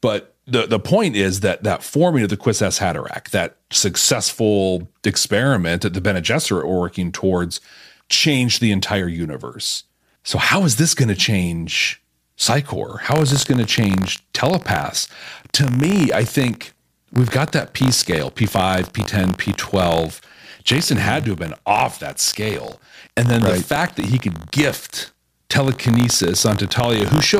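From 13.1 s to the end, the speech carries buffer tearing. The writer and reader of the ring buffer have slipped. Each 20 ms period splices in a small sliver of audio about 40 ms old. This gives a robotic 50 Hz buzz that rides on the voice.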